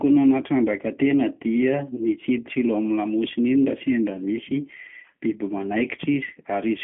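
G.729 codec damage runs throughout: the speech is rebuilt from a vocal tract model plus sparse pulses, which fits an 8 kbit/s G.729A link, confined to 150 Hz to 3.4 kHz, leaving a plainly rough, synthetic sound.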